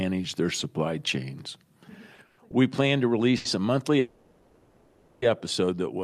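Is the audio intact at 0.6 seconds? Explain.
Yes, the audio is intact at 0.6 seconds, with no dropout, click, distortion or other fault at that moment.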